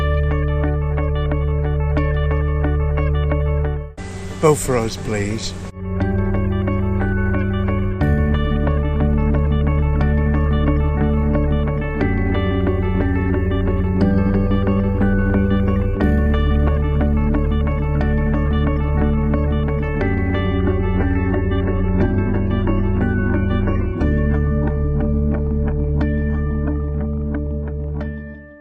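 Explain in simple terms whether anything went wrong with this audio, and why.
From 20.47 s to the end, the sound suddenly turns dull and synthetic. This is an adaptive stream at a lower bitrate, switched down because the connection slowed.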